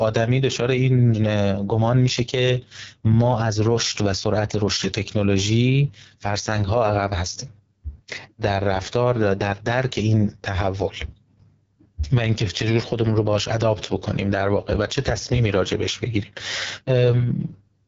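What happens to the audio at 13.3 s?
At 13.3 s the speech carries AMR wideband (HD Voice) codec damage, present throughout the clip. It sounds rough and raspy, which fits the lowest 6.6 kbit/s mode. A pulse-driven vocal tract model codes the speech coarsely. Nothing sounds above 7.5 kHz.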